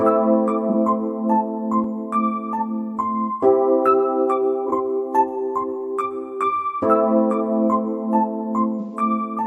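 Three spots show AAC frame loss with concealment. At 0.69 to 0.74 s and again at 4.66 to 4.72 s there's a brief smeared, noisy patch about 43 ms long, which fits one dropped frame that the decoder papered over by reusing the last good spectrum. The one at 8.80 to 8.96 s runs longer, about 128 ms, consistent with three frames in a row, so the fill-in smears and thins before the real signal comes back.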